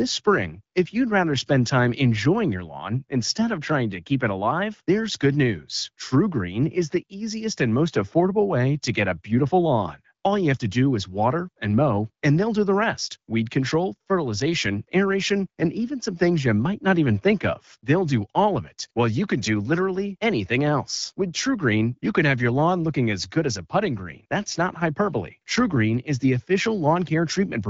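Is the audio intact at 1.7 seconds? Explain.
Yes, the speech at 1.7 seconds is intact, carried through the AMR wideband (HD Voice) codec at 12.65 kbit/s with no fault at that moment.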